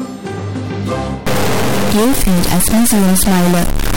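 Stuck bit from 1.27 s onward: a high bit, likely held fixed, offsets about half the samples by a large step, giving harsh, buzzy distortion.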